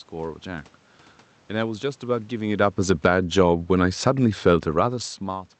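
A short speech recording with two gain faults. From 2.32 to 4.96 s, automatic gain falling pulls the level down by about 5 dB, so voice and room noise sink together, visible as a waveform envelope tapering gradually. Between 3.26 and 3.77 s, automatic gain rising briefly lifts everything by about 4 dB, showing as a half-second swell that brightens the whole spectrogram column, background included.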